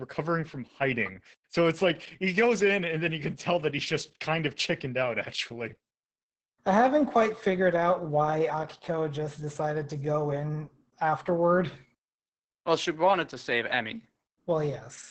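It's a speech clip with heavy Opus voice compression all the way through: nothing above 8.4 kHz, and a muffled, hoarse, faintly robotic quality from coarse linear-prediction coding. That points to SILK in wideband mode at a very low bitrate, around 10 kbps.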